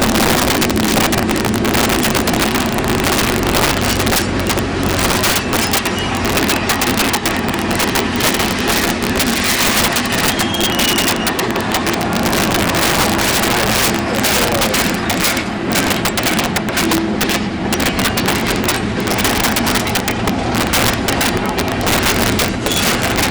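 Integer overflow runs through the whole clip. The level is pushed about 9 dB past full scale, and a small share of samples, around three percent, wrap to the opposite sign rather than being limited. Each peak over the limit flips across the full range, far harsher than clipping's flattened buzz.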